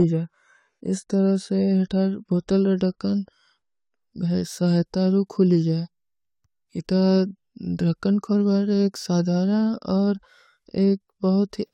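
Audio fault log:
0.0–4.0 s, adaptive stream starting at a low bitrate: the player opened on a lean encoding, fitting roughly 32 kbit/s AAC, so nothing sounds above 11.4 kHz and artefacts are heavier until quality jumps without a gap, consistent with a step up to about 96 kbit/s.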